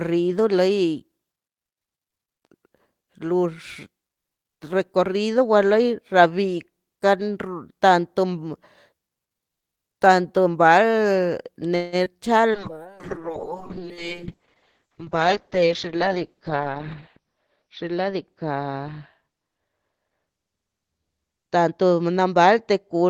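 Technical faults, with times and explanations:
11.75–11.95 s, call audio freeze: the last sound hangs on as a fading buzz for about 0.17 s, then the audio resumes exactly where it stopped with nothing lost. Packets were likely held up in transit, leaving the jitter buffer empty so the receiver stretched what it had.
12.05–12.09 s, skip ahead: playback lurches forward with almost no gap, and roughly 70 ms of sound is gone, the two sides butting together. A stretch of audio was dropped while later audio was already waiting, so the receiver jumped past it.
12.16–12.91 s, jitter buffer slow-down: the sound drags at 90% speed with unchanged pitch and drawn-out sounds. The receiver repeated individual pitch periods many times in a row, adding 83 ms to rebuild a reserve in a buffer that was running low.
12.53–23.10 s, call bitrate drop: from here to the end the sound turns rough and muffled, losing its top end. 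The bandwidth estimate fell and the encoder went from 32 to 7 kbps, sitting at the lowest rate for about 4.6 s, which narrowed the audio band from 20 kHz to 6 kHz.
14.78–17.18 s, jitter buffer speed-up: the sound runs hurried at 107% speed, pitch unchanged, for over two seconds. Too much audio had piled up in the buffer, so the receiver trimmed short pitch-period pieces many times in a row, removing roughly 200 ms to cut the delay.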